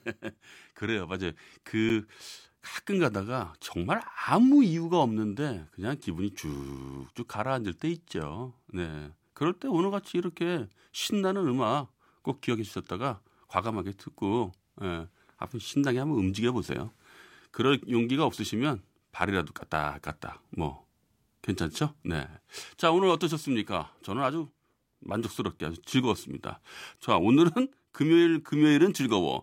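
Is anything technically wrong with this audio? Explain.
Yes. At 1.89 s (8 ms) and 25.59 s (10 ms), a block of digital silence briefly replaces the speech, from either a late output buffer or invalid calculated values. Each is heard as a tick or dip, and shows as a flat waveform segment and a narrow vertical gap on the spectrogram.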